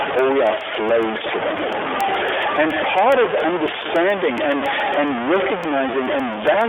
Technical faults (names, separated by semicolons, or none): stuck bit; iLBC codec; word clock ticks